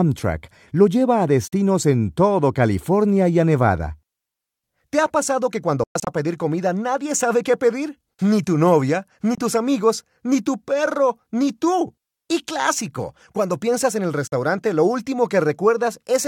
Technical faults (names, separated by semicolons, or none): Bluetooth dropout